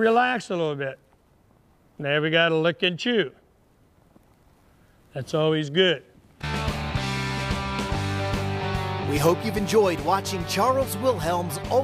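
No technical faults are audible.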